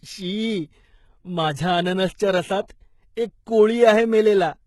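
A speech recording runs throughout with heavy codec damage whose sound points to HE-AAC compression at a low rate, likely around 16 kbps. The treble is not the original. It is rebuilt from copies of lower bands, so sibilants come out gritty and lisping, with a metallic sheen. On a spectrogram the energy stops cleanly at about 11.8 kHz, and the upper band shows blocky, repeated harmonic patterns that do not line up with those below the crossover. A short pre-echo occurs from 2.68 to 2.70 s. About 20 ms of hiss leaks ahead of a sharp onset because the codec spread the quantisation noise meant for the loud attack across the quiet start of its block, which softens and smears that attack. In the waveform a thin noise smear rises just before the transient, and on a spectrogram it shows as a broadband wash directly preceding the onset.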